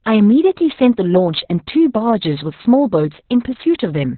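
The clip is speech, and it carries heavy Opus voice compression from start to finish. Nothing survives above about 4.4 kHz, so the sound is boxed into a narrowband, telephone-like range and muffled. The coarse excitation coding of the SILK linear-prediction coder leaves a hoarse, buzzy, slightly robotic texture. The damage fits SILK mode at a very low bitrate of around 6 kbps with long 60 ms frames.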